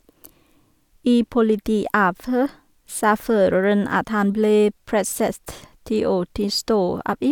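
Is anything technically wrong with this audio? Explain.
No, nothing technically wrong can be heard in this speech recording. No faults turn up anywhere in the audio.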